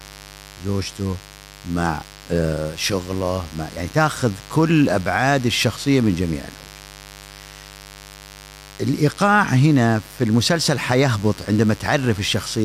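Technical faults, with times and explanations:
Throughout, mains buzz. A steady, raspy buzz sits under the speech, about 20 dB below it. Sharp switching spikes from the 50 Hz supply leak in twice per cycle, 100 times a second, spreading harmonics of 50 Hz up into several kHz.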